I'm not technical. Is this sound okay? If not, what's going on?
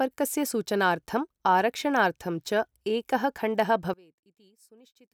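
No. From 3.94 s to the end at 5.14 s, the voice suddenly drops almost to nothing. The likely cause is one channel inverted: one stereo side is flipped upside down, so when the two sides combine, the voice cancels itself out.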